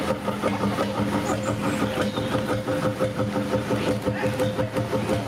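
Gain pumping runs throughout: the background swells in gaps and ducks by about 10 dB under loud sounds, likely from excessive gain hitting a fast limiter; the waveform looks flattened.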